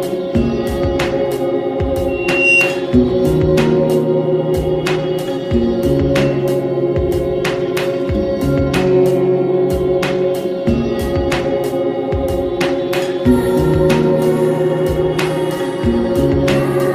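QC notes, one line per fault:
2.08–2.87 s, loudspeaker feedback squeal: a single tone at 2.8 kHz swells over roughly 0.4 s to about 5 dB above the programme, then stops. The microphone is re-amplifying its own loudspeaker, and the loop gain exceeds unity at that frequency.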